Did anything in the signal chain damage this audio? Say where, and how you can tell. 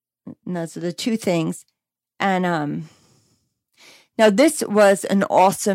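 No, there is no sign of damage from any stage of the signal chain, and the speech signal holds together without any disturbance that would point to the wiring, conversion, processing, transmission or playback.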